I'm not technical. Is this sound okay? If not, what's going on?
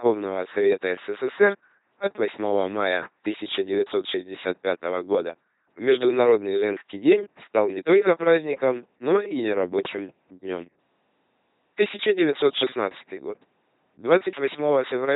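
No. The speech runs through an LPC-10 vocoder from start to finish. It rebuilds speech from a simple buzz or hiss source, so it sounds heavily mechanical and robotic, with no sound above 3.8 kHz, which makes it muffled as well.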